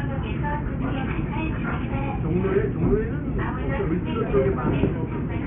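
Aliasing runs right through, start to finish: the audio sounds like it was resampled down to around 6 kHz with no anti-alias filter, so everything above 3 kHz folds back as unrelated tones, roughly 20 dB under the real content, giving a gritty, metallic edge.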